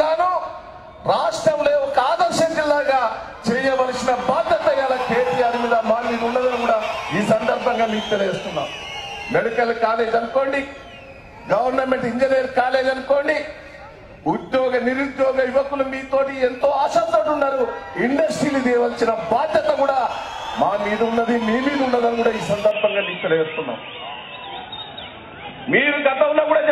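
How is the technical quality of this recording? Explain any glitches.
One glitch. Input switched to a poorer device at 22.71 s until the end, likely a change of microphone. Nothing above 3.8 kHz passes, so the sound turns dull instantly, adding faint new background noise at a similar level.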